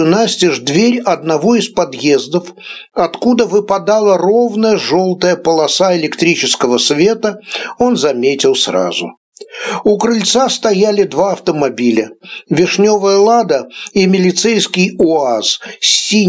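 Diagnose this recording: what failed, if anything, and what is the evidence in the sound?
The input gain was likely set far too high for the microphone, with a fast limiter or compressor pulling it down on each loud sound. Throughout the clip the level swings by around 20 dB, and dynamics are squashed. The call microphone processing itself, cutting everything above 8 kHz, is normal.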